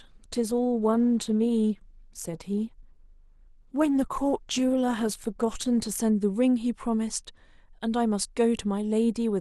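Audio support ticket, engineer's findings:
Speech opens dull and smeared, treble thin and partly synthetic, codec artefacts stronger. Clears abruptly at 6.0 s, no gap or dropout. Looks like the adaptive stream starting at a low bitrate: player grabbed a cheap rendition to start fast, then stepped up once it had measured throughput. The early stretch sounds like roughly 16 kbit/s Opus and the later part like something near 64 kbit/s. Player/ABR logic, not the source.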